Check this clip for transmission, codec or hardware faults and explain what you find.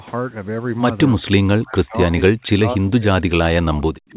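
One fault stands out in the speech, starting at 1.52 s and lasting to the end of the clip. The call codec's band limit at 4 kHz, consistent with G.711 A-law telephony, is also audible.

From 1.52 s onward the speech sinks sharply, at its deepest by around 40 dB. This is likely speech suppressed in double talk. With both ends talking at once, the echo canceller could not tell the near talker from echo of the far end and turned everything down. That pulls the speech under while the other side talks.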